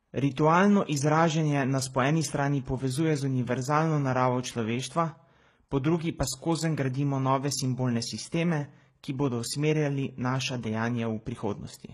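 From start to finish the speech carries two layers of coding damage at once: smeared, swirly high-frequency artefacts sit on top of a grainy, warbling texture, and nothing is present above 12.3 kHz. The likely cause is transcoding between lossy codecs. A low-rate MP3 pass, around 40 kbit/s, appears to have been re-encoded to HE-AAC at roughly 16 kbit/s, which spent its scarce bits on the earlier errors and added its own.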